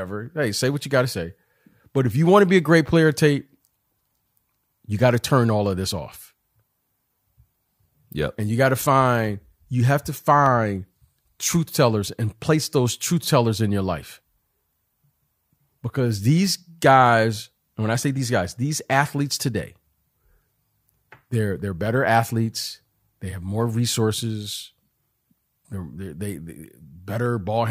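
Clock drift buffer slips run through this speech clip from 0.26 s to 27.26 s: a click about every 0.6 s, around fifty in all. This likely comes from two free-running clocks differing by a few hundred ppm, so the buffer between them periodically drops or repeats a handful of samples.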